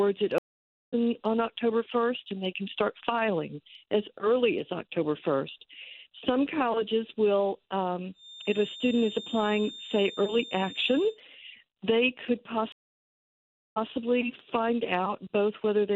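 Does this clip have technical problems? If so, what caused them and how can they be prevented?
Yes. There are two stream reconnects. At 0.38 to 0.94 s the sound drops out for 0.54 s, then resumes roughly 0.4 s further on. At 12.72 to 13.91 s a 1.04 s silence ends with the sound resuming 0.15 s earlier, repeating material. Each time the connection broke and a fresh decoder restarted mid-stream. A larger client buffer and a more stable network path would prevent this.

From 8.12 to 11.2 s a thin, single-pitch feedback whistle sits at 3.6 kHz, about 15 dB below the sound. It is likely a loudspeaker-to-microphone loop held just short of runaway feedback. Lowering monitor gain, moving the microphone away, or notching 3.6 kHz would prevent it.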